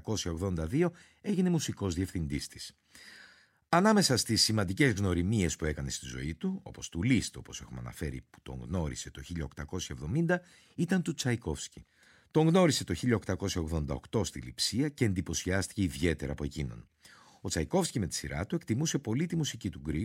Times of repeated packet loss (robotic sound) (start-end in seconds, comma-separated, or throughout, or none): none